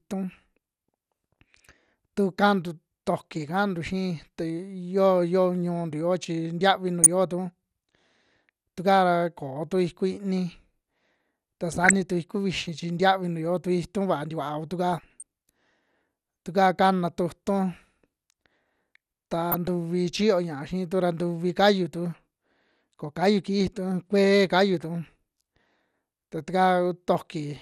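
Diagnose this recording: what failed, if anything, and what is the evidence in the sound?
The speech sounds dull and top-cut from start to finish, with a granular, gurgling edge on the voice where the upper range flickers in and out. The codec stage is the likely culprit: MP2 compression at a rate that fits about 80 kbps, where MPEG Layer II runs short of bits, shuts off whole high sub-bands and quantises the remaining ones coarsely. The damage is plainly audible.

Four short bursts of burbling sit on top of the speech at 7.03–7.07 s, 11.72–11.93 s, 14.93–15.23 s and 19.52–19.68 s. This is DAB burbling, introduced at the transmission stage. Weak reception let bit errors, at a rate of a fraction of a percent, slip past error correction into the MP2 stream. Corrupted samples then put short blips of noise into single sub-bands, and corrupted scale factors make sub-bands jump in level for up to a frame.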